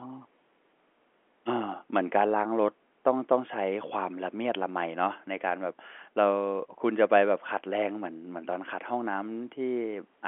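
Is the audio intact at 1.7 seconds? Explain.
Yes, the audio is intact at 1.7 seconds, with the speech carried normally through the G.711 telephone coding, whose band stops at about 3.8 kHz.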